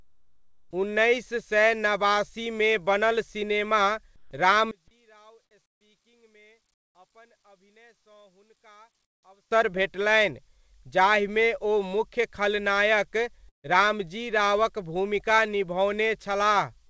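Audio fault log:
0.00–0.71, 4.16–4.31, 5.66–5.81, 6.74–6.95 and 9.05–9.23 s: comfort noise in place of the background. Pauses turn steady and featureless. This is likely because the sender stopped transmitting in silence and the receiver inserted synthetic noise. The first pause drops about 8 dB, the one after "सय नबासीमे बनल सिनेमा" stays level, and the later ones fall about 14 to 19 dB.
4.71–9.51 s: one channel inverted. Summed to mono, the sound nearly vanishes, about 32 dB down, leaving a faint residue until "भेटलनि जाहिमे ओ मुख्य". Likely reversed polarity on one stereo side, which cancels everything common to both channels.
13.49–13.66 s: burst of packet loss. About 150 ms is gone between "जाहिमे ओ मुख्य खलनायक" and "रामजी रावक भूमिका". The receiver briefly extends the last sound and then fades it. Nearly silent for about 130 ms, it resumes further on. Nothing is heard above 8 kHz, which fits G.722.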